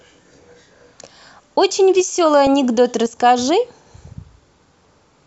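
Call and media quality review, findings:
DAB burbling over speech at 0.46 to 0.55 s, 2.13 to 2.47 s, 3.82 to 4.08 s. Short noise blips in single sub-bands. Residual bit errors get past error correction into MP2 audio data, corrupting samples.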